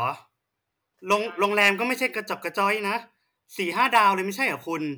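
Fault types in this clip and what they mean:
hard clipping: peaks driven about 4 dB past the level a stage can pass are cut flat, adding high harmonics heard as crackle on louder speech.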